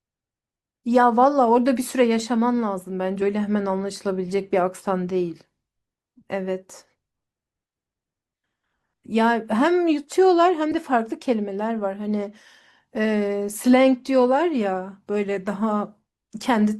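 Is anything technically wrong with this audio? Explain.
Yes, there are three brief dropouts in this speech, of two kinds.

At 2.19 s there is an underrun with a held sample. The output buffer ran dry for about 2 ms, and the converter froze on its last value. The waveform flattens, and roughly 2 ms of live audio is lost. A frame skip would jump ahead, not hold flat.

Compressed frames are skipped at 3.21 s and from 10.71 to 10.74 s. Whole frames were left out, so the speech leaps forward by roughly 70 ms, then roughly 40 ms. Those jumps fit about three and two 20 ms frames. Each join is a jump ahead, not the flat hold of an underrun.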